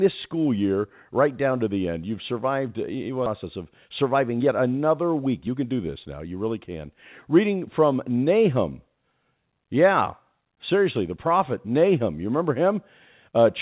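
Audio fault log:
3.26 s, skip ahead: playback jumps straight forward at this point with no gap and nothing filling it, so roughly half a second of speech simply never plays. Audio that had been held back was discarded while later audio was already queued, and the two sides of the cut are butted together. The effect is an abrupt splice where the sound lurches ahead, and the delay through the call drops by about the same half second.
3.86 to 4.49 s and 5.26 to 6.06 s, jitter buffer speed-up: in both stretches the speech runs about 8 percent fast while keeping its pitch, sounding slightly hurried. The receiver was holding more audio than it wanted and trimmed it by cutting out many short pieces a pitch period or so long in quick succession, roughly 50 ms in total from the first stretch and about 70 ms from the second. The call path's G.711 mu-law coding leaves nothing above 4 kHz throughout.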